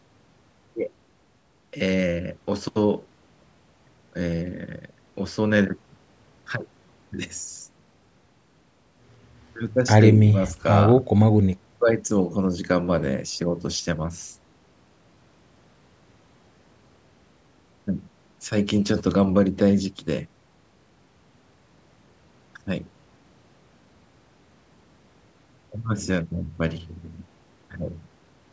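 No technical faults can be heard: the speech carries the ordinary signature of call microphone processing, with the lowest bass trimmed away and nothing above 8 kHz, and nothing in the signal breaks from that.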